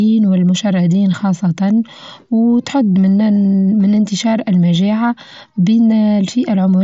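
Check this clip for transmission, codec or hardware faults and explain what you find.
No transmission faults found.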